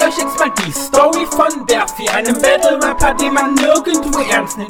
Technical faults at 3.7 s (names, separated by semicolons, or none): hard clipping